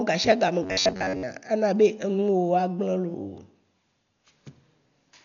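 Speech clip, dull throughout with nothing above 6.9 kHz and rough, fluttery noise around tones: heavy Dolby Digital compression, likely at a low bitrate around 48 kbps. From 0.63 to 1.23 s it turns into a rigid metallic buzz at about 94 Hz, robotic sound from repeated short buffers, likely about 11 ms chunks replayed over most of that stretch.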